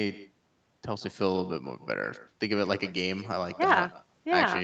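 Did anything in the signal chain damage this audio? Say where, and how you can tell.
Yes. The damage comes from echo with no canceller, introduced at the call-processing stage on the far end. Throughout the clip, every stretch of speech is followed roughly 150 ms later by a quieter, thinner copy, about 17 dB below the direct sound. A loudspeaker there fed its own microphone, and no echo canceller subtracted the return. On a spectrogram each syllable shows a faint ghost shifted right, which is easiest to see against the 8 kHz ceiling the call codec imposes.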